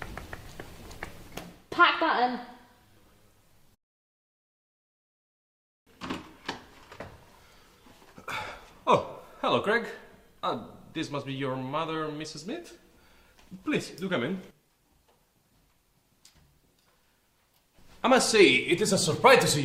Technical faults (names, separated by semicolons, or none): none